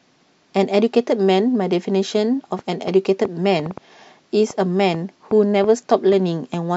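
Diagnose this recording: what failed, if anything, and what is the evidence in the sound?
A train of clicks runs from 2.59 s to 6.55 s: about fifteen similar pulses at roughly three per second, irregularly spaced, peaking a few dB above the speech and audible in pauses too. The repeated, uniform impulses point to likely interference coupling into the analogue wiring.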